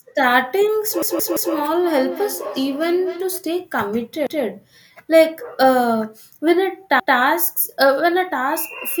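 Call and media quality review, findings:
Repeated buffer at 1.02–1.54 s (one ~171 ms segment heard four times), 4.27 s and 7.00 s (one repeat each). Hard-joined stutters from playout underrun re-sending the last block, which fits an 8192-sample buffer.

Feedback echo between two devices, 1.83–3.55 s. Speech returns roughly every 0.3 s, thinner and ringing, peaking about 12 dB below the direct speech. A second device in the room is replaying this call into the microphone, and the local echo canceller cannot remove it.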